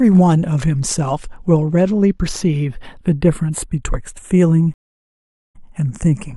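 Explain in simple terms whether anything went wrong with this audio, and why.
Something did go wrong: there's a stream reconnect at 4.74 s. The connection dropped, so the speech cuts out and you get about 0.8 s of dead silence until 5.57 s. The player then reconnected and started decoding again from a fresh point. When the speech comes back, it picks up about 23 ms earlier than where it stopped, so a tiny sliver just before the gap gets replayed.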